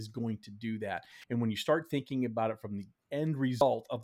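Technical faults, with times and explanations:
1.20–1.24 s and 3.58–3.61 s, damaged data in a compressed stream: two brief disruptions, each about 30 ms long, the first falling between "going to do that" and "and when you start". At each spot, corrupted bytes in the coded speech stream left the decoder unable to read the frames there. It lost sync and jumped ahead to the next valid frame header. That produces a brief disruption in the audio.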